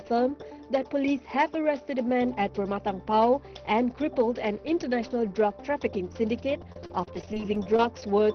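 From 6.72 to 8.04 s, repeated packet loss leaves a dozen short holes, none over 30 ms, each patched by repeating the preceding sound, so the audio turns choppy and robotic.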